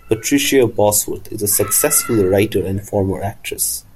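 No technical faults can be heard anywhere in the speech.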